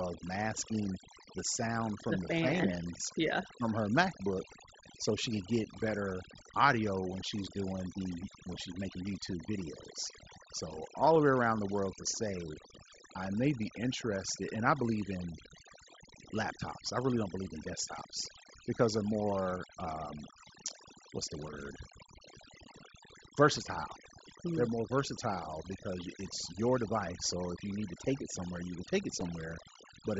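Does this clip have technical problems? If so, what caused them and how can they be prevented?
Yes. Overdone noise removal runs through the whole speech clip. The suppressor was set too aggressively, so bands near its noise estimate are pulled far down. The background drops and breaks up into twinkling specks. To prevent it, use gentler reduction and record in a quieter space.

Concealed Bluetooth headset packet loss appears as brief glitches at 11.14 s and 19.44 s, each about 15 ms, and at 29.2 s, about 7.5 ms. That fits one or two lost frames patched by repeating recent waveform, so the single loss at 29.2 s is nearly hidden. To prevent it, keep the headset close to the phone and away from interference. The mSBC link itself adds only a light graininess on louder sounds.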